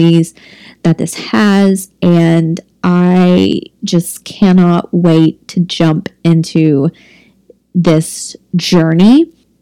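Hard clipping runs through the whole clip: the speech was driven about 8 dB beyond what a stage in the chain could pass, so a few percent of samples have their peaks sliced flat, adding high harmonics heard as harsh crackling fuzz on louder syllables.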